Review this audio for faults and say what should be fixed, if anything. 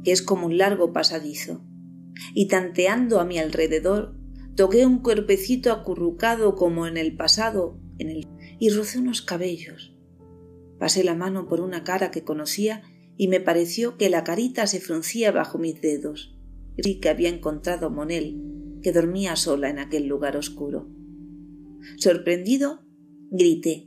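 CD skip at 8.23 s and again at 16.85 s. Each time a near-silent dropout marks the spot, lasting only a few milliseconds at the first and a couple at the second. The sound then resumes from a different point. This happens when the player's laser is knocked or thrown by a flaw off its track onto another turn of the disc's spiral, so playback briefly mutes and picks up somewhere else.

To prevent it, re-rip the disc with a secure, error-checking ripper after cleaning it, and keep the drive isolated from vibration.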